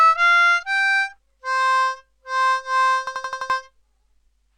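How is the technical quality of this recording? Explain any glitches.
A single glitch stands out. From 3.07 to 3.50 s, an 85 ms fragment repeats five times as a stuttering 11.7 Hz rattle, a system hang loop: playback froze while the hardware recycled one buffer, fitting 4096 samples, losing nearly half a second of sound.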